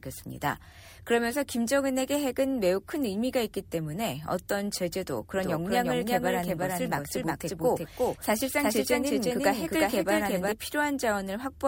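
From 5.38 s to 10.52 s there's a doubled audio track: a second full-band copy of the sound trails the original by roughly 0.4 s at about the same level, switching on and off abruptly, most likely from a slower second capture path or a misaligned edit.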